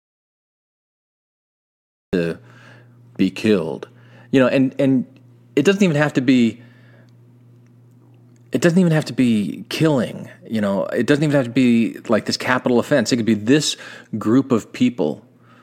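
It's a speech recording, and it opens with an audio dropout to silence: from the very start until about 2.13 s there's dead silence with no room tone at all, then the voice comes in mid-flow. That's most likely an input link or device that wasn't delivering signal while the recorder kept writing silence.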